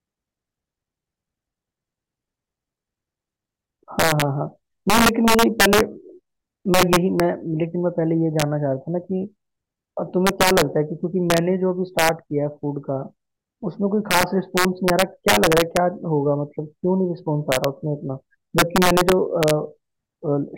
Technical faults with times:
0.00-20.57 integer overflow

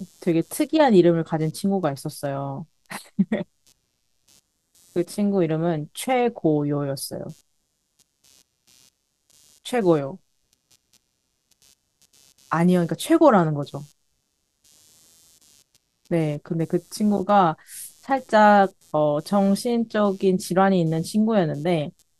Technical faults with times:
0.00-22.20 computer activity noise

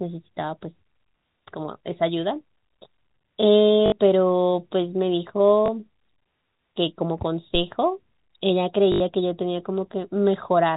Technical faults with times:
3.86-3.92 packet loss with last packet repeated
5.66 packet loss with last packet repeated
7.55-7.67 phantom power thump
8.92-9.00 packet loss with last packet repeated

